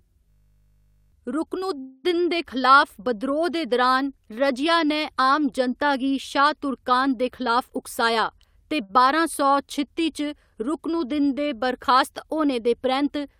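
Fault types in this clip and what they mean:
System hang loop: a 20 ms slice repeats 41 times from 0.3 to 1.12 s, a steady 50 Hz buzz rather than a fading fill, losing roughly 0.7 s.
Call audio freeze: just before "दे खलाफ बिद्रोह् दे", a 244 ms fading fill, likely from held-up packets; the audio then resumes where it stopped, with nothing lost.
Jitter buffer speed-up: after "गी शाह् तुर्कान दे", from 7.41 to 8.82 s, the speech runs about 5% faster at unchanged pitch, as short pitch-period pieces are removed.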